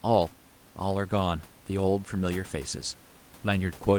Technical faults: none

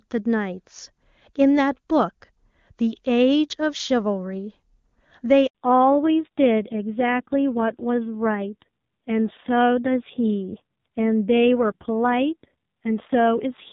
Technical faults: handover gap; fallback to narrowband

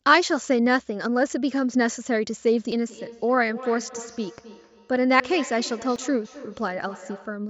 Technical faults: dropped buffer (overrun); feedback echo between two devices

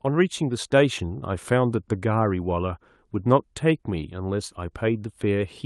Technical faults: none

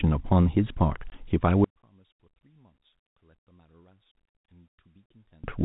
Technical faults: packet loss filled with silence; one channel inverted

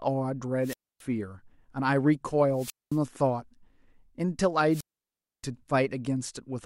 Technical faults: wireless microphone squelch dropout

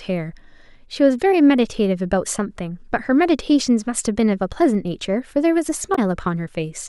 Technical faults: damaged data in a compressed stream

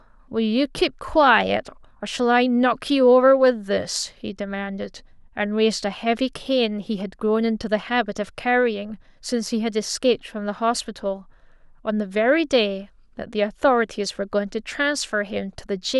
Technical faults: none

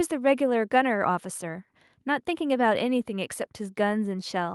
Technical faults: none

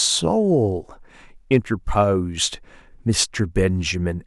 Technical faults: hard clipping

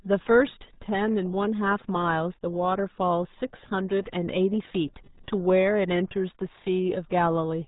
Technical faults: RealAudio 14.4 codec

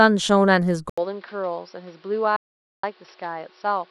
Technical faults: input switched to a poorer device; audio dropout to silence

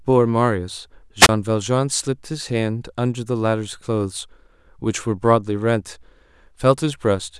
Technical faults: wireless microphone squelch dropout

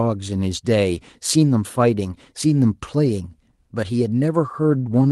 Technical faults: none

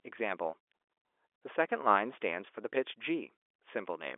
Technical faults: none

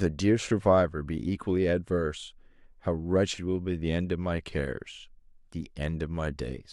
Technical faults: none

